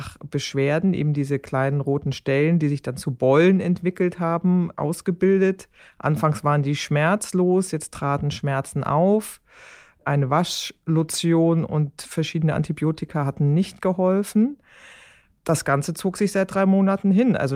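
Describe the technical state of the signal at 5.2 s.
At 5.2 s the speech signal is intact, with no fault present at that moment.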